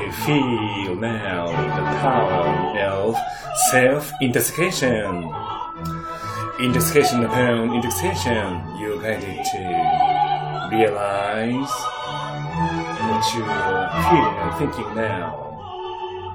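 A brief stutter at 15.41 s replays about 70 ms of sound once, from repeated frames: a short run of compressed frames decoded twice, lengthening the audio by 70 ms.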